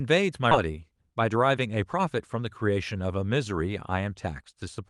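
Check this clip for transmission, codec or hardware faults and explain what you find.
Two faults show up, both tied to the call link, and they're back to back near the start.

At 0.51 to 0.53 s there's a skip ahead. A chunk of audio, roughly two-thirds of a second, never gets played. Either it was lost in transit or the jitter buffer overflowed and threw it away while newer audio was already queued. Playback just jumps forward with no fill. You hear the speech on either side spliced almost directly together, so a piece of the utterance vanishes abruptly.

Right after that, from 0.63 to 2.44 s, there's a jitter buffer speed-up. The buffer had built up more audio than it wants, probably because delayed packets arrived in a burst. To cut that backlog, the receiver kept trimming tiny slices of one or a few pitch periods, about a fifth of a second in total. The speech runs at about 110% speed with the pitch unchanged, so that stretch sounds noticeably hurried.

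Underneath it all is the Opus call path, with the top end rolling off around 12 kHz and the usual coding noise.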